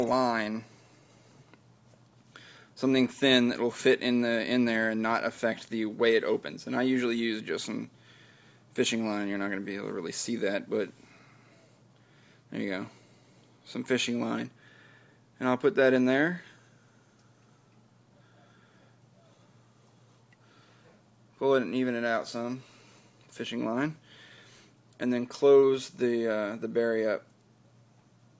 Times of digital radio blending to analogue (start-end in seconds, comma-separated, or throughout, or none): none